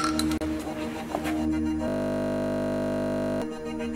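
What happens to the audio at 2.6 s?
At 2.6 s you're right in the middle of a system hang loop, running from about 1.88 to 3.42 s. The system froze while the hardware kept replaying the same 20 ms slice of its buffer, so the sound collapses into a steady 50 Hz buzz.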